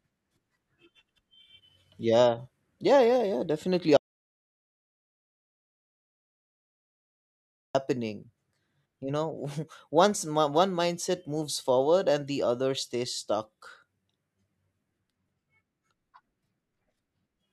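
At 3.97 s, right after "yeah yeah yeah definitely", the speech cuts out mid-flow. This is an audio dropout to silence. For 3.78 s, until 7.75 s, there is silence with no room tone. The likely cause is lost input while recording continued.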